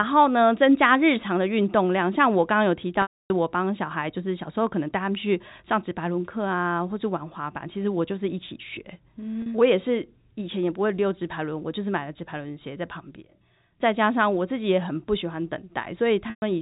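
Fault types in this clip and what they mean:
Packet loss with pitch repetition: chunks of the stream went missing, and the receiver papered over each hole by looping the last pitch cycle and fading it out. The 40 ms gap at 9.42 s just sounds like a brief buzzy hold, while the 280 ms gap at 3.02 s and the 120 ms one at 16.3 s fade to silence before the sound cross-fades back in. The gap lengths fit 20 ms packets, all over a clean narrowband G.711 telephone path.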